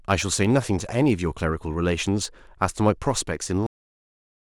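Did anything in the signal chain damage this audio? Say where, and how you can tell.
Yes. A steady buzz at about 91.9 Hz runs under the speech from start to finish. That is a block size mismatch (truncated) in the driver or buffer stage: one stage writes slightly longer blocks than the next reads, so each block's tail is discarded. The size difference is tiny, since timing and pitch stay normal.

The speech stops dead at 3.67 s and falls straight to digital silence, with no decay, through to the end. This is a cut-off end in the storage or playback stage: the final buffers were never written or played out, so the sound is severed mid-utterance.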